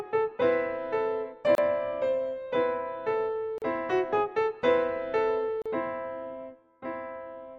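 Three short dropouts land at 1.55 to 1.58 s, 3.58 to 3.62 s and 5.62 to 5.66 s, one every 2 s. Each is a gap at a join of encoded pieces. The audio was encoded in 2-second chunks and spliced without trimming the encoder's start delay and end padding. You get a hole of about 30 ms, then 38 ms twice, with smeared edges, and the sound resumes right where it stopped.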